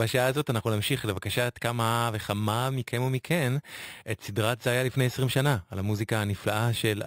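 Throughout the speech there is imaging from sample-and-hold upsampling. Each original sample was simply repeated to fill the higher rate, with no smoothing filter, so mirrored copies of the speech spectrum sit above the real content. The lowest copy fills 6 kHz to 12 kHz at about 17 dB below the signal, which fits an original rate of 12 kHz. It is heard as a bright, metallic fizz that rises and falls with the speech and moves opposite to its pitch.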